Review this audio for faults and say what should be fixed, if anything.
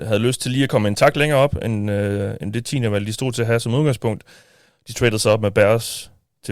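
Nothing in the signal calls for fixing, since no technical faults can be heard anywhere in the recording.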